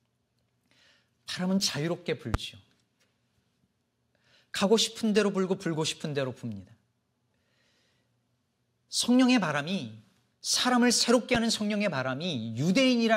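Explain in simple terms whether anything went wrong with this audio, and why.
Two loud pops interrupt the speech, at 2.34 to 2.37 s and again at 11.35 to 11.38 s. Each is a single sharp crack, much louder than the speech, which continues underneath. The likely cause is a brief electrical jolt, such as a plug, switch or static discharge, entering the recording chain.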